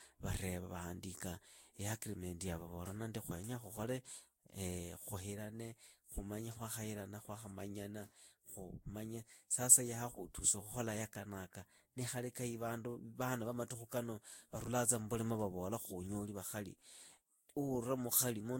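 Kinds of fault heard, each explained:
generation loss: The speech sounds swirly, hollow and smeared, and attacks blur. Nothing remains above 16.6 kHz. The likely cause is several Vorbis re-encodes near 64 kbit/s.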